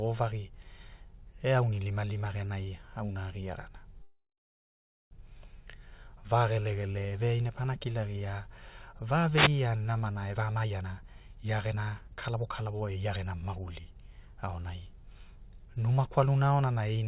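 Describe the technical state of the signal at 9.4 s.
At 9.4 s the radio link of an analogue FM wireless microphone fades as reflected signals cancel at the receiver, so its noise floor surges. This wireless microphone noise hit runs from 9.34 to 9.50 s, between "pana kilagia va" and "namana e", and sounds like a brief swish of static. The burst is confined below 4 kHz, like everything passing through this G.711 mu-law call path.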